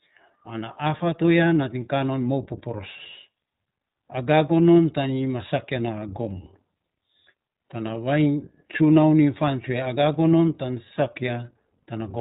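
Throughout the speech, the iLBC codec is plainly audible: nothing reaches past 4 kHz, so the voice sounds boxed-in and telephone-like, with a slightly rough, synthetic grain. Each short frame's excitation is coded independently of the one before, and the texture fits 20 ms frames at around 15.2 kbps. A spectrogram would show energy ending in a hard ceiling at 4 kHz, with a blotchy, quantised look inside the voiced bands.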